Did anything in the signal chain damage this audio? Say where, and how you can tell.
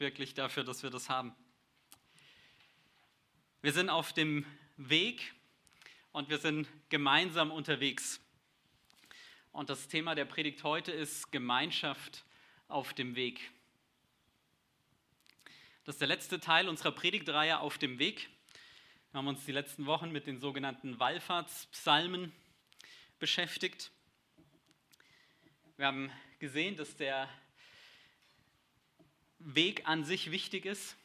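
No, nothing in the signal chain damaged this audio.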